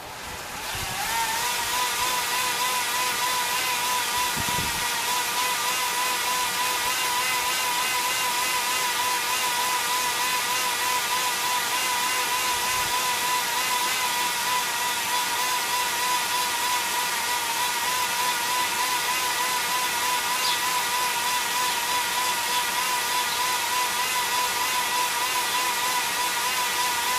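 Nothing stood out as a technical problem on listening to the audio.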